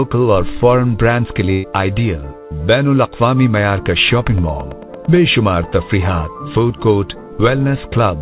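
At 1.52 s there's a burst of packet loss running to about 1.66 s. The receiver stretches the last bit of sound across roughly 117 ms, letting it fade, and then jumps ahead, so about 120 ms of the audio is simply gone.

From 4.16 to 5.17 s a train of clicks ticks along at a steady 9 or so per second, about ten in all, peaking around the level of the sound itself. That's likely interference or a struggling interface injecting pulses, heard over the narrowband G.711 call audio that stops at 4 kHz.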